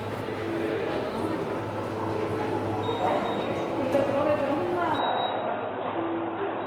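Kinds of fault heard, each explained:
Opus compression: The everyday sounds turn grainy and rough throughout, with tonal parts smeared into noise, likely from Opus in its music mode, pointing to a low rate near 24 kbps. A spectrogram shows filled-in, noisy bands reaching about 20.2 kHz rather than clean harmonics.
Input switched to a poorer device: From 4.98 s to the end, the sound abruptly narrows and dulls, with no gap and roughly the same level, likely from a change to a lesser input. A spectrogram shows content stopping near 3.8 kHz and a faint new noise floor, around 40 dB down.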